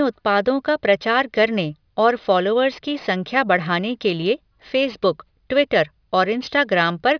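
Aliasing runs through the whole speech clip. The sound was brought down to a lower sample rate without a proper filter first, which fits a drop to about 11 kHz. Everything above the fold at 5.5 kHz bounced back down into the band as false, unrelated tones. Sibilants turn gritty and metallic. The folded energy sits around 30 dB below the speech. The spectrum runs hard up to the 5.5 kHz edge.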